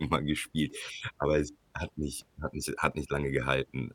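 Nothing in the recording stood out as a technical problem on listening.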